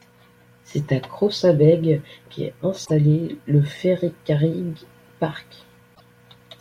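At 2.82 to 2.91 s and again at 5.92 to 6.01 s, damaged data in the compressed stream causes a brief glitch in the speech. The decoder misreads corrupted frames, loses sync and hunts for the next valid frame header.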